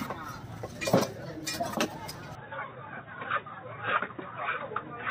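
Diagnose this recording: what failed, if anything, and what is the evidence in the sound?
At 2.35 s the sound abruptly turns dull and boxy with no gap, and stays that way to the end. On a spectrogram everything above 3.8 kHz vanishes from that point, a hard horizontal ceiling. The waveform steps down by about 5 dB, and a new faint noise floor sits well below the signal. This is most likely an input switched to a poorer device at the driver or device-routing stage, handing capture to a band-limited microphone or headset call profile.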